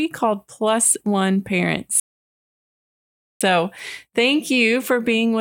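At 2.00 s the speech halts for about 1.4 s, a rebuffering stall: playback starved, then resumed exactly where it paused, unlike a dropout, which skips audio.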